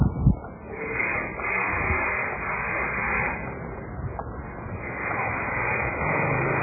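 Throughout, MP3 compression at a starved bitrate, likely near 8 kbps, strips everything above 2.5 kHz and leaves the audio muffled, watery and swirling.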